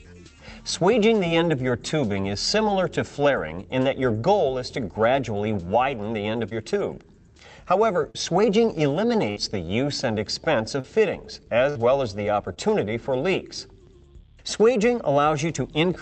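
Short concealed packet loss strikes first at 6.49 to 6.53 s, then at 8.11 to 8.16 s. Each time, a few hundredths of a second never arrived. The receiver extended the last sound, then blended back. It comes across as a brief smear.

A burst of packet loss follows at 9.30 to 9.38 s. About 60 ms went missing. The receiver held and faded the last sound across the gap. The audio then picks up further along.

Short concealed packet loss returns at 10.80 to 10.86 s. A second burst of packet loss hits at 11.70 to 11.79 s, again with about 60 ms missing. A final short concealed loss falls at 12.54 to 12.58 s. All of this passed through an Opus call path, band-limited near 8 kHz.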